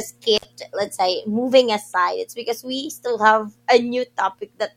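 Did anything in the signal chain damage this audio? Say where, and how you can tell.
Yes: an intermittent contact in the analogue wiring cuts the speech for about 58 ms near 0.37 to 0.45 s, before "let's say moving". Crackle at the edges and hiss during the gap mark a loose connection, not a digital dropout.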